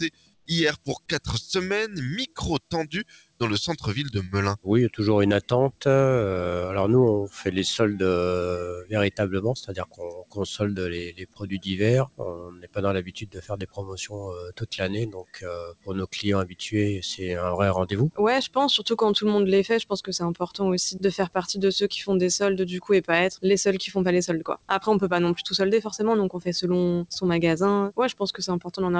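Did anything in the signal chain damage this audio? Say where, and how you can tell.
Yes. A noise suppressor applied to music or sounds is active for the whole clip, at the call-processing stage. Gain swings of roughly 15 dB can be heard as the level pumps and flutters. A speech-tuned suppressor treats steady tones, ambience and reverb as noise and pulls them down between attacks. The high end stops at 8 kHz, as expected from the wideband call path, which sounds consistent with a G.722 codec.

Sound cut by the noise suppressor shows up at seven points, also in call processing. These are 0.04–1.28 s, 2.27–5.84 s, 8.76–16.6 s (the longest stretch), 18.11–18.56 s, 20.41–21.02 s, 24.41–24.7 s and 28.32–28.73 s. Sustained and decaying material sinks by up to about 20 dB, and tails end early while sharp onsets survive. That is the suppressor cutting the sound it wrongly classes as noise.

Comfort noise in place of the background appears from 0.34 to 0.46 s, and is most likely sender-side discontinuous transmission. 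For 120 ms the background, which sits about 43 dB below the loud passages, becomes a flat, featureless noise about 11 dB quieter. The sender's voice detector likely stopped sending audio, and the receiver filled the gap with synthetic noise shaped only roughly like the real background.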